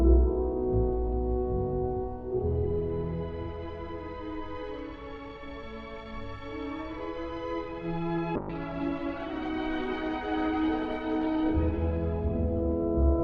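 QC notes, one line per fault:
8.36–13.24 s, call bitrate drop: the encoder is starved of bits, coding turns coarse and rough, and the audio band narrows from 20 kHz to 12 kHz, consistent with a fall from about 96 kbps to 12 kbps, held for 4.67 s without recovering before the end.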